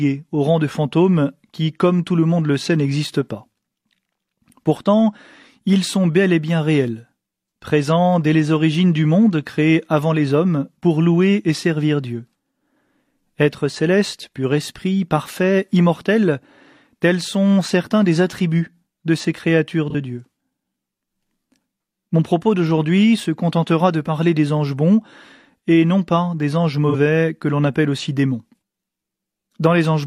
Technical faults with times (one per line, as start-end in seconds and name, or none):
19.90-19.95 AAC frame loss with concealment
26.89-26.95 AAC frame loss with concealment